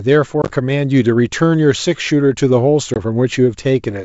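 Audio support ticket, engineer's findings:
Packet loss on an ADPCM call. 0.42–0.52 s: a handful of hard-edged silent gaps, about 50 ms lost across 80 ms, longest run 20 ms. 2.94–2.97 s: 20 ms lost. Decoder predictor and step size drift from sender's; speech re-enters slightly distorted until resync. G.722 wideband coding shows faint or no damage.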